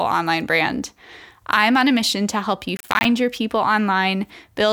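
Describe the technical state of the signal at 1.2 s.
At 1.2 s the speech signal is intact, with no audible technical fault at that moment.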